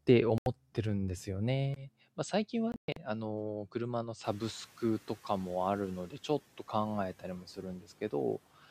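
Bluetooth dropout at 0.38 s to 0.46 s: the speech cuts to silence for about 81 ms, then resumes further along as though it had kept playing, likely because audio packets failed to reach the headphones in time and were discarded.

Input switched to a poorer device at 1.74 s, lasting to the end: after a 20 ms gap the speech turns duller and a few decibels quieter, with a faint new noise floor, likely from the recording moving to a narrower-band microphone or headset profile.

Bluetooth dropout again at 2.72 s to 2.97 s: this time the losses are scattered across about 244 ms, totalling about 183 ms of silence, the longest single gap 122 ms, so the speech stutters through several holes before it carries on.

Noise suppressor catching up at 4.24 s to 4.54 s: when the room noise jumps sharply around 4 s, it first comes through with little reduction, and the suppressor needs 300 ms to update its estimate before pulling the noise down by about 6 dB.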